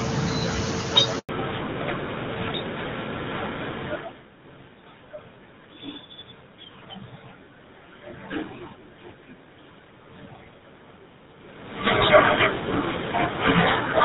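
A speech recording with two faults. The call was handed between networks, and a handover gap from 1.19 to 1.29 s leaves about 100 ms of silence where speech frames never arrived. After the handover, at 1.29 s, the call suffers a fallback to narrowband: it leaves HD Voice, consistent with AMR-WB near 23.85 kbit/s, for a narrowband codec like GSM full rate. Everything above 4 kHz disappears for the rest of the clip, leaving the voice duller and rougher.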